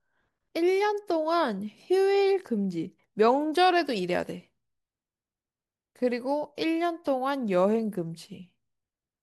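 A short speech recording with nothing technically wrong to point to anywhere in it.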